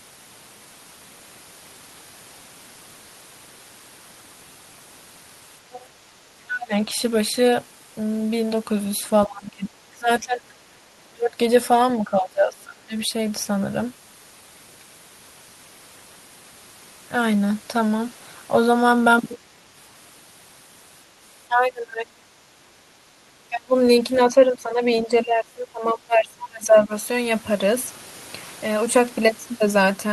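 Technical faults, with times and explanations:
5.72–5.85 s and 24.17–24.21 s, other side's voice leaking through: brief scraps of a second voice sit about 20 dB under the talker, likely loudspeaker echo the canceller missed. A spectrogram shows faint, separate harmonic traces beneath the main speech, and the waveform shows only small ripples.
6.46–6.89 s, 9.26–12.97 s, 19.36–19.44 s, 21.48–22.32 s, 23.49–26.93 s, speech suppressed in double talk: the talker's level dips by roughly 10 to 30 dB, likely because the canceller ducked everything while both sides spoke. The longest runs last a few seconds. The waveform's envelope visibly caves in, and the spectrogram's upper bands fade or break into patches.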